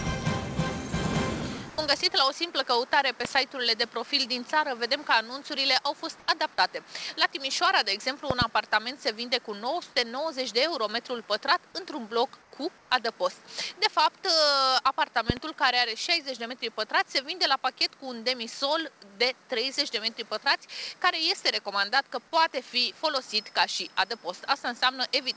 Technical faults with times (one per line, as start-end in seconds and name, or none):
1.70-1.78 sound dropped by the voice detector
3.25-3.27 loud pop
6.20-6.28 comfort noise in place of the background
8.31-8.44 loud pop
12.42-12.52 comfort noise in place of the background
12.78-12.90 comfort noise in place of the background
15.30-15.39 loud pop